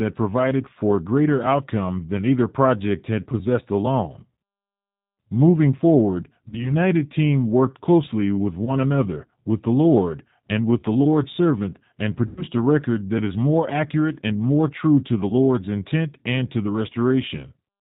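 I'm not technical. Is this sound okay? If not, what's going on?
No. The speech sounds slightly rough, muffled and synthetic throughout, because it passed through the G.729 codec, a phone-call compressor that rebuilds voices cheaply and drops the higher tones.

At 6.49 to 6.72 s, 8.65 to 8.71 s and 12.27 to 12.44 s the voice is briefly stretched into a buzzy or noisy sound that fades. This is VoIP packet loss concealed by the speech codec: bits of the call went missing, and the system guessed to fill the gaps.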